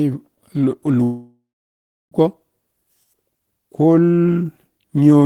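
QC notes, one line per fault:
1.03–2.14 s, long network dropout: The speech breaks off at 1.03 s. The last sound carries on as a fading buzz, then turns to silence for about 0.67 s. Speech returns at 2.14 s, but about 1.08 s of it is gone for good. This is likely a long network dropout. No audio reached the receiver. It stretched the final sound to cover the gap, then gave up and played silence until the stream came back.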